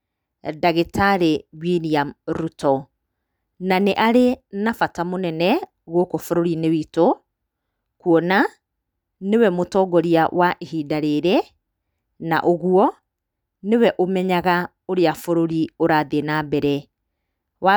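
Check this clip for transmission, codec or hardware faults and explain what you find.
No transmission, codec or hardware faults can be heard anywhere in the recording. The speech continues without any break or disturbance in the signal.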